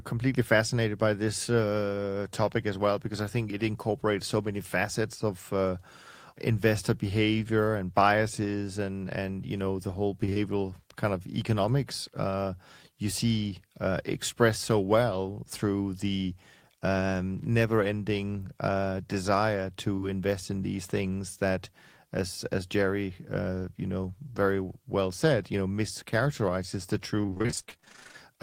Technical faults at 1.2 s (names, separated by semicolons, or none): none